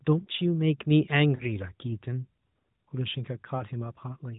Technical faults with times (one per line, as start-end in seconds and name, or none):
1.36-1.44 lost AMR speech frames
3.56-3.63 lost AMR speech frames